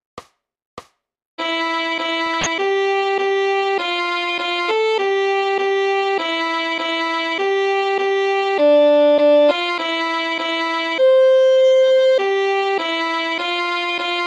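A harsh burst of chirping, squeaky noise, loud, cuts through the sound from 2.26 to 2.47 s. This is a corrupt frame decoded: flipped bits in a short run of several compressed frames were played anyway, so misread codes scattered energy across the wrong frequencies.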